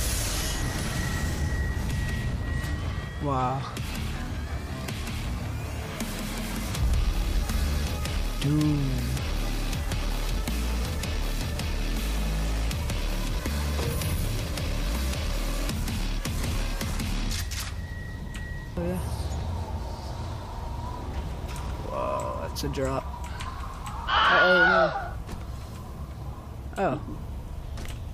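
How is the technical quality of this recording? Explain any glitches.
No glitches or technical faults can be heard here.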